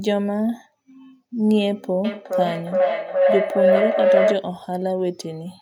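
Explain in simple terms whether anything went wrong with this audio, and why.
Something did go wrong: from about 2.05 to 4.56 seconds there's a feedback howl. Two devices in the same room were on the call, so sound kept looping from speaker to microphone, growing each trip into a tone around 500 Hz, with the repeats coming roughly every 0.4 seconds.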